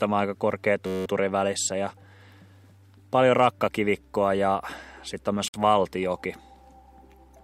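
At 0.86 s a system hang loop kicks in: a 10.67 ms slice, which fits a 512-sample buffer, repeats about 18 times, giving a steady 93.8 Hz buzz until 1.06 s. At 5.48 s the sound drops to 58 ms of silence then resumes, likely a Bluetooth stall where the headphone buffer ran dry waiting on resent packets.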